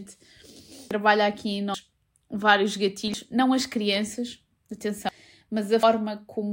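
Compressed frames skipped interrupt the speech at 0.72 to 0.91 s, 1.74 s, 2.95 to 3.14 s, 5.09 to 5.18 s and 5.83 s. Whole frames were left out, so the sound jumps forward, by about half a second at the first and a tenth of a second at the third. Unlike a silent dropout, nothing goes quiet.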